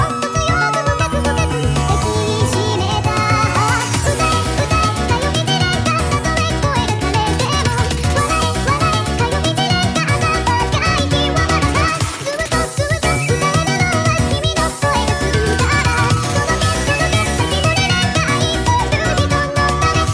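Throughout, a wrong sample rate plays the samples about 1.38 times too fast, fitting 16 kHz audio played at 22 kHz, so everything sounds hurried and 5.55 semitones high.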